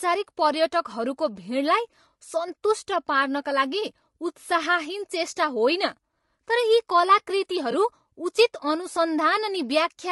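Throughout the speech there is plainly audible codec damage, most likely from low-delay AAC compression of the AAC-ELD kind used in video calls. Its short frames cannot separate the voice's pitch harmonics cleanly, so noise fills the gaps between them and the voice sounds rough and grainy, with a thin, somewhat synthetic top band. The level of damage fits a bitrate around 32 kbps. Unlike ordinary AAC's swirly pre-echo, this roughness is steady and grain-like rather than smeared ahead of attacks.

From 7.71 to 7.74 s there is AAC frame loss with concealment. About 20 ms of audio went missing and the decoder covered it by reusing the last good spectrum, so instead of a gap the sound turns briefly noisy and smeared. Because the loss is so short, it never fades toward silence. It differs from a plain dropout or click in that the sound continues through the hole, blurred rather than cut.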